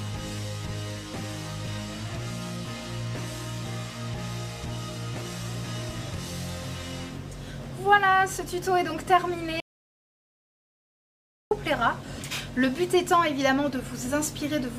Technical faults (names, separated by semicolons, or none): audio dropout to silence